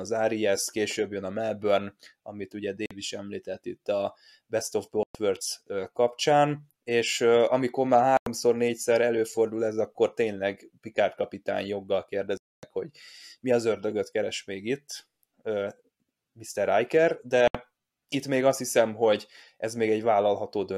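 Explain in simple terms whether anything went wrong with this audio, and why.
Sound packets likely failed to reach the headphones in time, a Bluetooth dropout, so the speech cuts abruptly to silence five times: at 2.86, 5.03, 8.17, 12.37 (longest, about a quarter second) and 17.48 s. Each gap lasts 46 to 255 ms, then the speech resumes as if it had kept playing.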